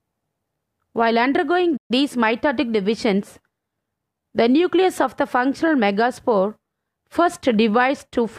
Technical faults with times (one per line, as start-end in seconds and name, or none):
1.76-1.91 playback stall